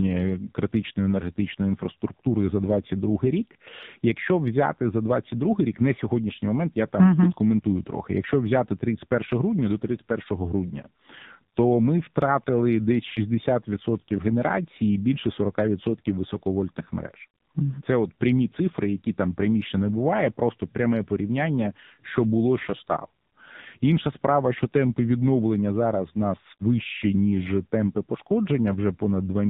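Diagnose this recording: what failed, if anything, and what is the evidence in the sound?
The failure is at the codec stage: the speech has passed through the AMR narrowband mobile codec for its whole length. Nothing above 4 kHz survives, and the voice is buzzy and synthetic, with heavy damage consistent with one of the lower modes, around 6.7 kbps. The codec resamples to 8 kHz and rebuilds each 20 ms frame from a vocal-tract filter excited by a few pulses, so at this bitrate the fine detail is replaced by that coarse model.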